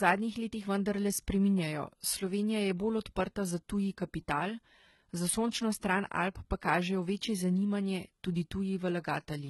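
Speech, heavily codec-damaged throughout. Nothing sits above 11.8 kHz. The top sounds synthetic, likely from HE-AAC compression at a bitrate near 16 kbps.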